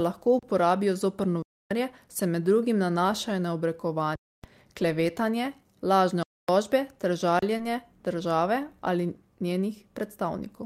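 The speech stops dead and resumes at 0.39–0.43 s (before "uporabijo zoper"), 1.42–1.71 s (between "lahko uporabijo zoper" and "se med drugim nanašajo"), 4.15–4.44 s, 6.23–6.49 s and 7.39–7.42 s. These are underruns with a held sample: the output buffer emptied, the converter froze on its last value, and some of the live audio was lost, roughly 30–40 ms in the short gaps and around 300 ms in the long ones.

At 7.57–7.61 s, just before "države ali", a brief smear replaces 20 ms of sound. This is short concealed packet loss: the receiver extended the preceding sound to cover the missing audio, then blended back.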